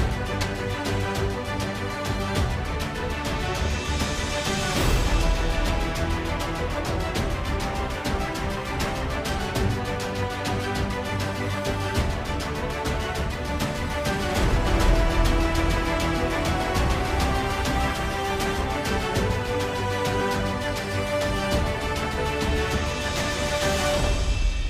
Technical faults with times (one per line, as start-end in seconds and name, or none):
0.41-0.44 compressed frames skipped
14.67-17.95 doubled audio track
20.20 compressed frames skipped